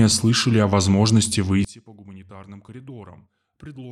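Speech that, from 1.65 s to the end at 3.91 s, suddenly drops by about 23 dB into a faint remnant with the shared centre sound gone. One channel inverted is the likely cause: reversed polarity makes the shared centre cancel when summed to mono.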